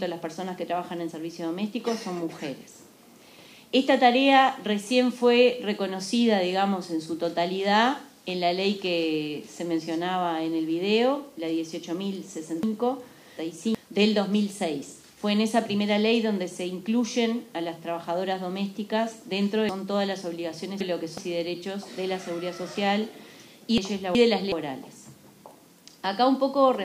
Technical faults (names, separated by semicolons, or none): chunks out of order